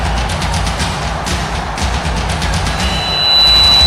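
Loudspeaker feedback squeal begins at 2.65 s and runs to the end. A microphone is hearing its own loudspeaker, and at 4 kHz the loop gain passes one, so a pure tone swells over roughly 0.7 s into a piercing squeal about 10 dB above the sound.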